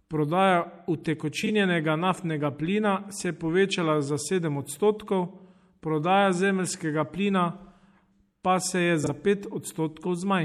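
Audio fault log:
throughout: MP3 compression. The sound is watery and swirly, with plainly audible damage. The likely cause is a lossy encode, which fits about 64 kbps.
1.43 to 1.49 s and 9.03 to 9.10 s: frames out of order. Two adjacent 26 ms blocks play swapped. This causes a brief garbled flutter.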